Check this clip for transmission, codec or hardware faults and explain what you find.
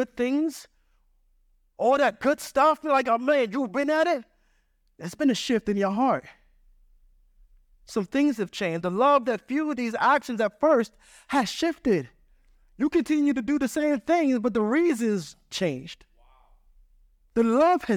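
Nothing in this speech recording stood out as a problem on listening.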